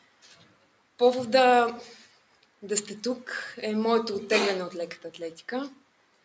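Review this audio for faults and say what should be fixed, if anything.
A noise suppressor tuned for speech was applied to music or sounds throughout. It rides the level by around 5 dB, so held sound thins and pumps. Unlike a compressor, it leaves attacks largely untouched.

Sound was cut by the noise suppressor from 0 to 1.0 s, 2.02 to 2.63 s, and 5.74 s to the end. Steady sound sinks by about 12 dB while sudden onsets still come through, unlike a dropout, which silences everything.

To prevent this, switch off noise suppression or enable a music mode on the call's microphone path.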